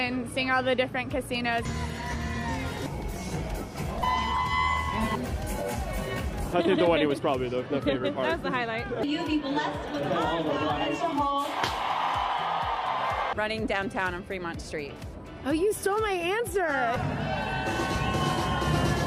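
Lost LE Audio frames at 4.00–4.02 s: about 22.5 ms went missing, which fits three dropped frames, and the decoder refilled the gap with the previous spectrum under random signs, briefly smearing the sound into noise.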